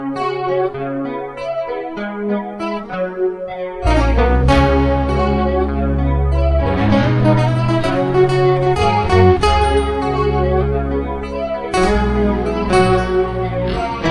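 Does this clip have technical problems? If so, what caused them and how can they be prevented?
No, nothing technical goes wrong anywhere in this one, so there's no problem to trace back or prevent.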